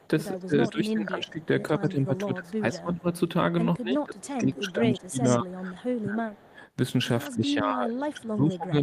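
From 0.0 to 0.71 s a faint second copy of the speech trails it by 163 ms, about 25 dB down. This is an echo leak, likely from a far-end loudspeaker whose echo canceller let part of the pickup through. Further brief leaks recur at 1.42 s, 5.25 s (loudest, about 10 dB down), 5.93 s and 6.42 s. The fixed 163 ms lag separates this from room reverberation, which smears continuously rather than repeating.

Overlapping the first leak, from 0.46 to 3.06 s, the talker's level sags by up to about 20 dB across roughly 1.5 s in pieces. This is speech suppressed in double talk, likely the canceller ducking everything while both sides spoke. It recurs from 3.77 to 6.6 s (about 25 dB, roughly 2 s affected) and from 7.29 s to the end (about 25 dB). Unlike packet dropouts, the dips are partial and ragged rather than clean gaps.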